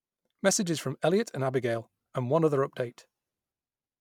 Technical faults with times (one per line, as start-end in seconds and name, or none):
none